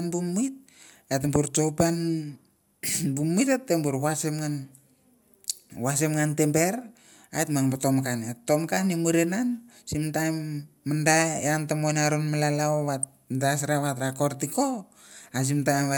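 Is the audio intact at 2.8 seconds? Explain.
No. DAB burbling runs from 2.75 to 2.89 s in this speech. Weak reception lets bit errors slip past the error correction into the MP2 audio data, so corrupted samples put short blips of noise in single sub-bands and corrupted scale factors make sub-bands jump in level for up to a frame. The damage spreads over about eight frames, which fits an error rate of a fraction of a percent. It sounds like short blips of noise laid over the speech.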